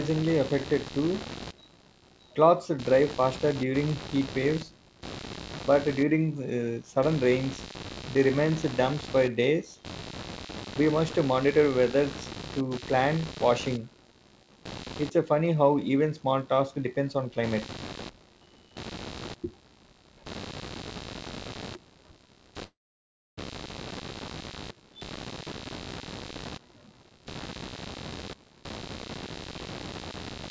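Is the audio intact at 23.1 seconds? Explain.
No. From 22.64 to 23.39 s the sound smears into a fading buzz and then drops to near silence for about 0.65 s, so 23.1 s falls in a gap. When the audio returns, about 0.74 s is simply missing. This is likely a long network dropout: packets stopped arriving, and the receiver stretched the last sound before giving up.

A buzzing pulse at about 70 per second, roughly 15 dB below the sound, is also present at this moment and runs through the whole clip. It is computer activity noise, where processor or graphics load shifts the shared ground of the audio circuit.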